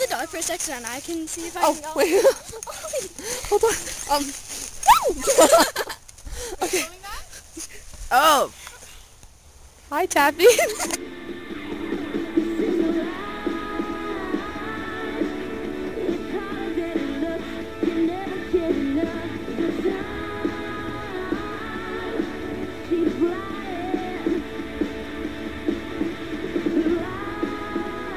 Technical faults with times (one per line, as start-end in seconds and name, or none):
none